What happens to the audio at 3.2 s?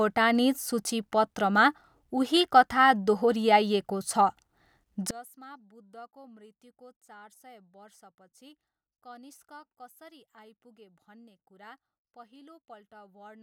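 Nothing goes wrong at 3.2 s: the speech carries on intact through that moment, with no dropout, click or distortion.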